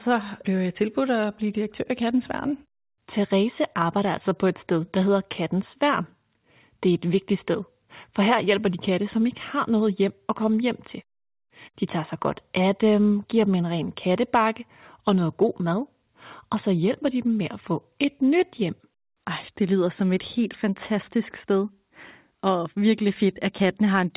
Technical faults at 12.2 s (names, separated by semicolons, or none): none